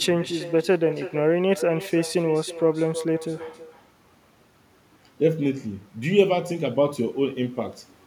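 Echo with no canceller runs throughout this speech recording: every phrase returns roughly a third of a second later as a thinner copy about 13 dB down. The far end's loudspeaker feeds its microphone, and nothing subtracts that loop before sending it back.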